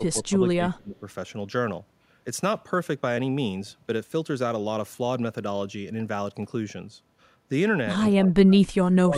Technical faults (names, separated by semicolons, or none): speech suppressed in double talk